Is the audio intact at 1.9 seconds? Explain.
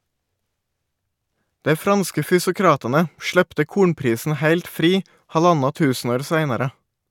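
Yes, at 1.9 seconds the speech runs intact with no audible fault.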